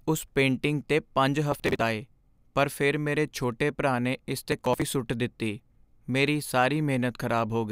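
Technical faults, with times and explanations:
1.52–1.82 s and 4.52–4.82 s, processor overload crackle: right after "ਉਸ ਪੇਂਟਿੰਗ 'ਤੇ ਪੰਜ", and again after "ਛੋਟੇ ਭਰਾ ਨੇ ਇਸ" just before "ਸੁੱਟ ਦਿੱਤੀ", the speech breaks into a gritty tearing for about 0.3 s. The processor fell behind on buffers of roughly 10 ms and dropped many in a row, which fits a heavily loaded machine. Each skipped buffer leaves a hard-edged gap, so the speech jumps forward in a fast chain of clicks. A single dropout would give one clean hole instead, and this tearing stops as soon as the load eases.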